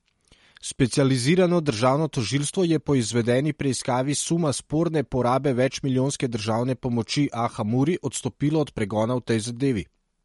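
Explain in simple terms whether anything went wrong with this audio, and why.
The speech was most likely squeezed hard by MP3 compression, which saves space by discarding sound detail. Throughout the clip, everything above about 11.2 kHz is gone, so it sounds dull, and quiet detail flickers in and out, giving a watery, swirly edge.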